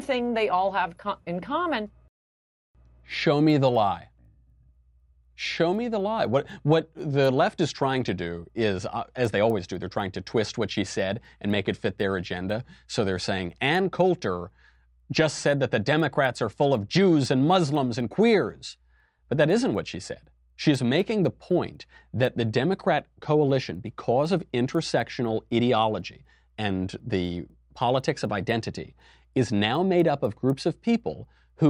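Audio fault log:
3.0–31.7 s, resampler restarted on every block: each 250 ms block converted separately, likely 24 kHz to 48 kHz, leaving edge errors heard as ticks four times a second wherever there's signal.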